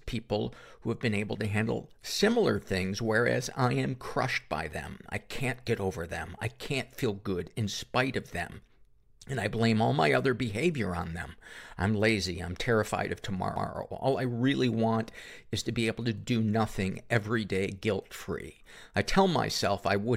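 A CD skip at 13.56 s: the player's laser jumped off its track onto a different turn of the disc's spiral, either from a knock or from a flaw in the disc, so playback mutes for a few milliseconds and resumes elsewhere. In this speech clip that is heard as a brief tick followed by an abrupt jump in the talk.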